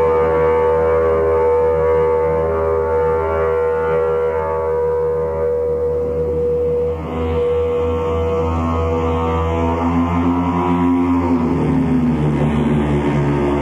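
No technical faults are audible anywhere in the clip.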